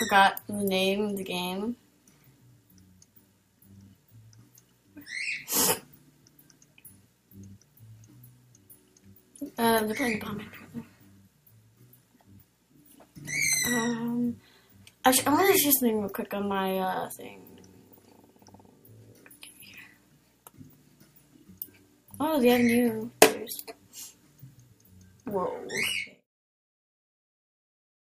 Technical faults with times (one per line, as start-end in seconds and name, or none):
none